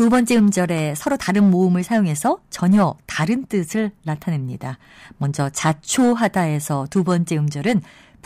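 Hard clipping appears five times. The first runs from 0.00 to 0.60 s, overdriven by about 7 dB. Then come 1.07 to 2.85 s, about 5 dB over; 5.65 to 6.41 s, about 5 dB; 6.97 to 7.14 s, about 3 dB; and 7.67 to 7.72 s, about 5 dB. In each, the speech peaks exceed what a stage can pass. Their tops are cut flat, adding high harmonics. The result is a harsh, crackling fuzz on the louder parts.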